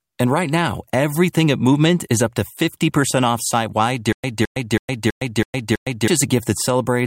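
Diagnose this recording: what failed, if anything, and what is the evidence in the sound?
Right after "off site wide", from about 4.13 s to 6.08 s, you get a stutter with silent gaps: a 215 ms fragment plays, then about 110 ms of dead digital silence, repeating six times on a steady 326 ms cycle. That's likely a playback or stream stall, where each retry replays the last buffered chunk and then runs dry. Whatever audio belonged in those two seconds never made it out.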